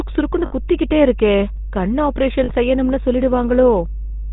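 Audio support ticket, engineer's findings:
Mains hum. Steady low tone at 50 Hz under the whole clip. Loud, only about 10 dB below the speech. Probable component: grounding or a power supply near the analogue input. Mechanism: a ground loop or transformer field couples the 50 Hz power line into the signal path. It stays constant through speech and pauses.

GSM full-rate codec. Plainly audible buzzy, gravelly roughness on speech throughout. Nothing above 4 kHz; sibilants dull and clipped. Fits a 13 kbps GSM full-rate link. Probable component: the cellular leg of the call. Mechanism: the codec keeps a vocal tract model and excites it with regularly spaced pulses, retaining only every third excitation sample. The coarse excitation gives the rasp. Band limit from the narrowband design.

Lost GSM frames. Two short dropouts with a rough, metallic ring. First at 0.46 to 0.53 s, about 60 ms, which points to three lost frames. 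Second at 2.44 to 2.51 s, about 40 ms, likely two frames. Probable component: the radio link. Mechanism: the decoder replaced each bad frame with the last good frame's settings, repeated. The held, ringing tone follows. Gaps too short to reach silence.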